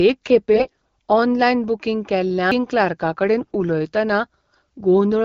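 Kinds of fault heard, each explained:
AMR bit errors: A weak radio link corrupted the less protected bits inside a run of AMR frames while the checksum on the critical bits still passed, so the decoder accepted damaged data. Roughly a tenth of those bits were wrong, misplacing the excitation pulses and skewing the fine pitch, gain and spectral values. The speech keeps its rough pitch and loudness but turns hoarse, scratchy and gargly from 0.54 to 0.89 s and again from 3.41 to 3.56 s, against the clean HD Voice coding around it.
CD skip: A knock or a disc flaw made the laser jump to a different turn of the spiral track, so the player briefly lost its place, muted, and resumed reading from elsewhere on the disc. At 2.51 s this is heard as a tiny tick from a mute lasting only a few milliseconds, with the speech carrying on from a displaced point rather than flowing on continuously from where it was.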